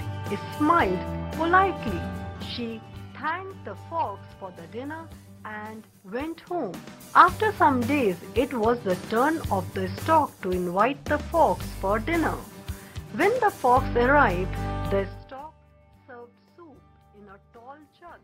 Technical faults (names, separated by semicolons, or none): zipper noise